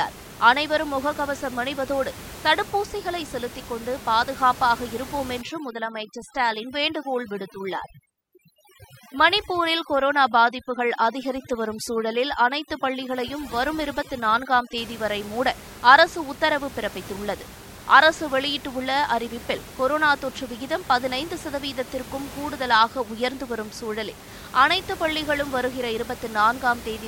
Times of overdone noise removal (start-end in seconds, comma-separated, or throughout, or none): 5.42-14.78